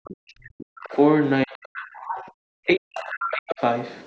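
From 0.00 to 0.07 s the room sound drops away almost completely, by about 40 dB, then returns. This is background gated by the echo canceller: with the loudspeaker active, the canceller clamped the microphone hard for roughly 70 ms.

From 0.05 to 0.96 s a faint second voice sits under the speech, roughly 20 dB down. This is the other side's voice leaking through, likely because the echo canceller left a residue of the loudspeaker signal in the microphone path.

Between 0.38 and 2.06 s the talker's speech sinks and breaks up in places, dropping as much as around 40 dB over about a second in total. This is speech suppressed in double talk, likely caused by both ends speaking together so the canceller could not separate its own talker from the echo and pulled both down.

From 1.77 to 2.28 s the leaking far-end voice returns, now closer, around 15 dB below the speech.

At 2.34 to 2.38 s the background gates out again, about 40 dB down for roughly 40 ms.

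From 2.66 to 3.61 s the speech is again ducked and chopped by double-talk suppression, with similar depth. Overlapping it, from 2.95 to 3.55 s, the other side's voice is at its strongest, only about 10 dB under the speech.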